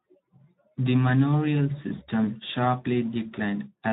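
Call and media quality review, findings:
Speex codec artefacts, start to end: speech sounds plainly hoarse and noisy, with a grainy edge on everything. Probably a Speex path starving the CELP excitation of bits, which fits a setting around 11 kbps. Worth bumping the quality.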